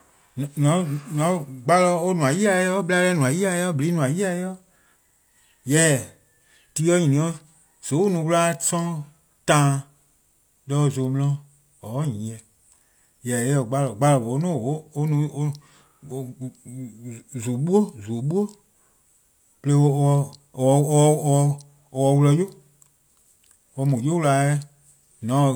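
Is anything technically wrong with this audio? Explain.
No, nothing stood out as technically wrong on listening to this speech recording.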